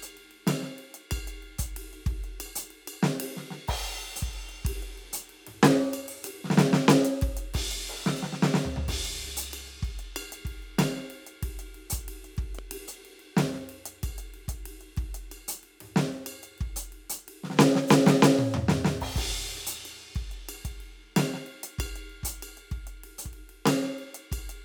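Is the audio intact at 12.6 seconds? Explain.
No. At 12.59 to 12.61 s a sudden voltage pulse, likely from a plug, switch or static discharge, was added to the signal. It produces a single loud pop, peaking about 5 dB above the music, which continues underneath.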